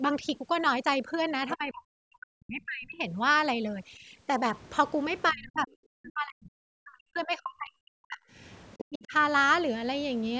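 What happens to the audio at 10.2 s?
Nothing goes wrong at 10.2 s: the speech continues intact there, with only the room noise, about 22 dB below the voice, and the call microphone processing's normal low-bass roll-off and 8 kHz upper limit.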